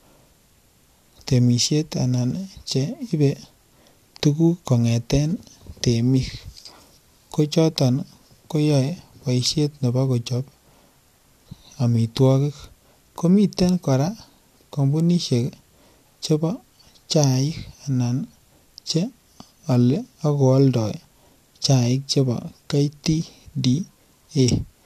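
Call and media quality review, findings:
No faults found in the speech signal, with nothing audible to attribute to capture, network or playback.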